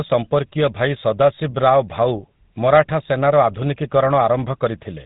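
From start to finish the speech carries GSM full-rate codec damage, and it's plainly audible: a buzzy, gravelly grain from the pulse-driven excitation, nothing above 4 kHz, and a dull top end, all of which fits the old 13 kbps GSM coder.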